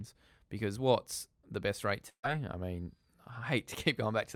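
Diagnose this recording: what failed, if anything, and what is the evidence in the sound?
The network dropped a burst of packets, about 140 ms of speech, from 2.09 to 2.25 s. The receiver extended the last sound, heard as a held buzz or hiss that fades to silence for the final 80 ms or so. A spectrogram shows repeated, decaying bands, then a blank gap before the speech resumes further on.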